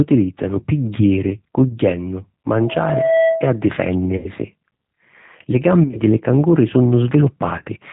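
Throughout, the speech carries the sound of the G.729 codec at 8 kbit/s. Each 10 ms frame is rebuilt from a vocal-tract filter, a pitch predictor and a few pulses, so voicing sounds slightly rough and synthetic. A spectrogram shows a hard ceiling at 4 kHz with nothing above it, and harmonics that look smeared and grainy rather than clean.

From 1.68 to 1.76 s comes the first VoIP packet loss concealed by the speech codec. The gap, about 20 ms, fits two lost frames. The decoder keeps repeating its last pitch and filter at falling gain, so the sound stretches into a brief buzzy tone or coloured noise, and the voice stays weak for a moment afterwards.

From 2.54 to 3.63 s a loudspeaker feedback squeal appears at 653 Hz. Microphone and loudspeaker form a loop whose gain exceeds one at that frequency. The tone swells over about 0.7 s to sit a few decibels above the speech. On a spectrogram it is a single bright horizontal line that thickens as it grows, and the waveform envelope rises steadily under the speech.

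Further concealed losses follow. From 4.17 to 4.30 s a solid run of about 80 ms becomes a buzzy tone or coloured noise that fades. From 5.83 to 6.01 s about 80 ms of dropouts are scattered over 120 ms, with no run longer than 20 ms. From 7.58 to 7.68 s about 40 ms are lost across 80 ms, with the longest run 30 ms. These spots show as blurred, flattened harmonic stretches and dips in the waveform envelope, and the speech stays weak or distorted for a short while after each one.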